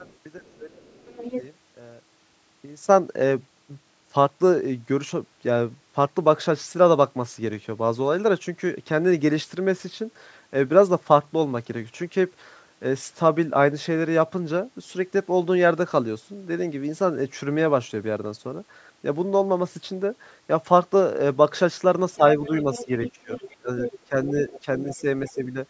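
Speech, with two stretches where both ends of a call talk at once. From 0.00 to 1.23 s, the talker's voice dips in short patches, about 10 dB at worst, adding up to under half a second. From 22.17 to 25.56 s it happens again, harder, with drops of about 20 dB totalling around a second. This is speech suppressed in double talk. The likely cause is an echo canceller that cannot tell the talker from loudspeaker echo, so it turns both down. Over nearly the same spans, 0.07 to 1.42 s and 22.44 to 25.30 s, a second voice sits underneath, roughly 15 dB below the talker. That is the other side's voice leaking through. It likely comes from the far end playing on the talker's loudspeaker and not being fully cancelled from the microphone. The band stops at 8 kHz, which fits normal call microphone processing.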